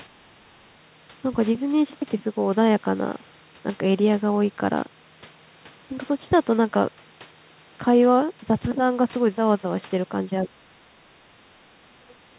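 At 0.22–0.49 s, 10.44–10.96 s and 11.67 s to the end, the speech dips sharply, shallow at first and then ducking deeper, around 35 dB at the close. This is likely speech suppressed in double talk, with the echo canceller mistaking overlap for echo. Waveforms show carved-out troughs, and spectrograms show faded bands beneath a 4 kHz ceiling.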